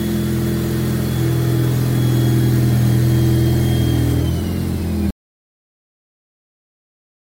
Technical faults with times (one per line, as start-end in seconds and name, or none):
5.10-7.39 audio dropout to silence